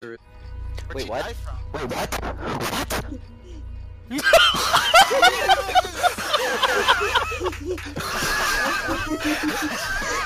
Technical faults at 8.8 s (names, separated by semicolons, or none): doubled audio track